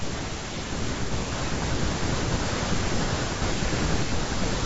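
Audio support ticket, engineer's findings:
Low-delay AAC compression, throughout. Speech rough and grainy, noise filling gaps between harmonics, top band dull and synthetic. Likely AAC-ELD: low bitrate starves the spectral lines of bits, leaving noise between harmonics. Damage plainly audible, consistent with roughly 32 kbps.

AAC frame loss with concealment, 3.05 to 3.09 s. Brief smeared, noisy, phasey patch. Decoder rebuilt the gap from the last good spectrum. Duration fits one dropped frame, about 30 ms of audio replaced.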